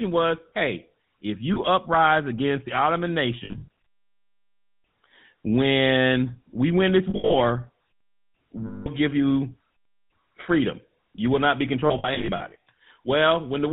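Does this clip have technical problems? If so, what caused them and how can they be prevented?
Yes. The GSM full-rate codec runs throughout, giving the sound a buzzy, gravelly roughness and cutting everything above 4 kHz. That fits the 13 kbps coder's pulse-driven vocal-tract model rather than simple low-pass filtering, which would only muffle the sound without adding grit. A wideband codec such as AMR-WB or Opus avoids it.

Lost GSM frames occur at 1.54–1.59, 3.44–3.68, 7.10–7.35, 8.66–8.88 and 11.86–12.56 s. In these spans the last good frame is repeated, producing a metallic ring instead of the clean silence of an ordinary dropout. The 8.66 s loss is one continuous gap. The 1.54 s loss is a single frame, and the others are scattered losses. Reducing radio-link errors with better coverage or stronger channel coding prevents them.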